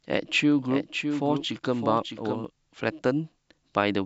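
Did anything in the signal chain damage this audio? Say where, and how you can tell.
Yes. A doubled audio track from 0.69 to 2.45 s, likely a second, slower capture path in the driver or buffer stage feeding the mix. A full-band copy trails the speech by about 0.7 s, roughly 5 dB quieter, with no reverberant tail, and starts and stops abruptly.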